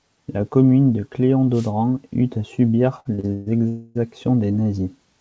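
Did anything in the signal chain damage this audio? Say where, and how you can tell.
Yes. At the analogue radio link, a wireless microphone noise hit sits between 1.53 and 1.71 s, just after "commune de" and before "eut à subir". Reflections cancelled the FM carrier, so receiver noise surged up as a brief burst of static over the speech.

In the network and jitter buffer stage, repeated stalls (stutter) run from 3.00 to 3.48 s. The buffer emptied four times, the longest wait 130 ms, and about 243 ms was filled in, half that span. The speech drags and stutters, though nothing is lost.

From 3.68 to 3.97 s the sound holds on its last moment for about 270 ms, a decaying buzz or hiss rather than silence, then resumes where it stopped. That is likely a call audio freeze: packets delayed in transit starved the jitter buffer, inserting a gap without dropping audio.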